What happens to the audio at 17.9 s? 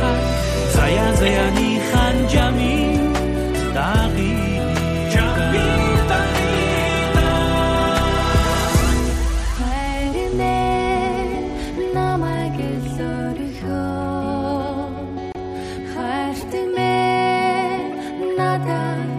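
At 17.92 s a short, sharp blip cuts through the audio. It lasts about 30 ms and ends by 17.95 s. This is a corrupt frame decoded. Bits inside one compressed frame were damaged, but the decoder played it anyway. The misread gains and codes put energy at the wrong frequencies for the length of that single frame. The result is a brief chirp-like burst of noise. It peaks at roughly -20 dBFS.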